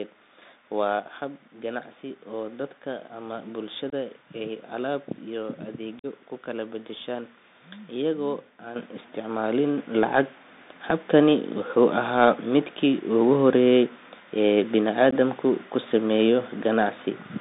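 Throughout the clip the speech carries the sound of a Bluetooth CVSD headset codec. The audible band runs only from about 200 Hz to 3.7 kHz, consistent with a 64 kbps CVSD link, where each sample is coded as a single up-or-down bit with an adapting step size. The damage is plainly audible. A granular hiss sits under the voice, sibilants come out scratchy, and loud high-frequency content distorts because the step size cannot keep up with it.

Unconcealed Bluetooth headset packet loss first occurs at 3.90–3.94 s, right after "dadka ama". About 22.5 ms of audio is missing, roughly three packets' worth, and it is replaced by silence or an idle pattern rather than patched over. This leaves a short hole with hard edges. The second loss runs from 5.99 to 6.06 s, between "alaab iyo" and "ku kala beddeshaan". It is longer, about 45 ms, consistent with a run of around seven lost packets.

At 8.76 s the microphone volume is stepped up by about 8 dB in a single jump. 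At 9.78 s it is stepped up again by about 4 dB. Each time, the voice and the background noise get louder together, abruptly, as the call software raises the input gain in discrete steps instead of ramping it.

The last packet loss falls at 15.11–15.13 s, just before "ku sameeyo". About 15 ms drops out, a couple of packets' worth, and the result is a brief break in the speech.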